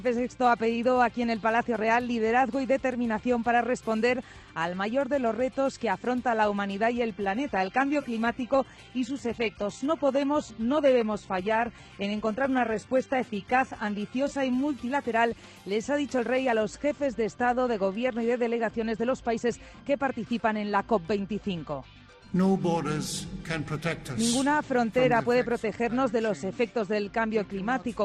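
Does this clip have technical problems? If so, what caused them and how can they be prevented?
Yes. From 7.12 to 15.12 s the adaptive stream drops to a lower bitrate. The switch is sudden, with no gap. The treble turns thin, with nothing above 11.8 kHz, which fits a low-bitrate HE-AAC stream. A steadier connection or a higher minimum bitrate would prevent it.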